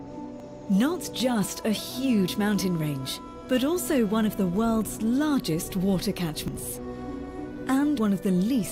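The capture side most likely fell behind at four points, so the hardware overwrote samples before they were read. Each lost stretch is spliced shut with no gap, and the sound jumps forward abruptly. This dropped buffer (overrun) pattern lands at 0.4 s (roughly 40 ms missing), 1.2 s (roughly 20 ms), 6.48 s and 7.98 s (roughly 70 ms each). The two later skips remove the most material.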